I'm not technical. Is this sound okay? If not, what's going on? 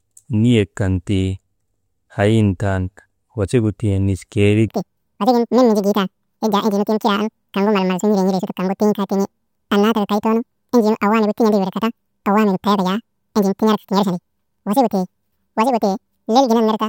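No. From about 4.68 s to the end, the speech is read two samples at a time (double speed): it plays twice as fast and an octave higher. Unlike a simple pitch change, speed and pitch jump together.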